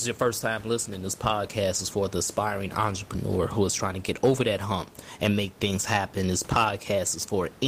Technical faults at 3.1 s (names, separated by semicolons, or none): none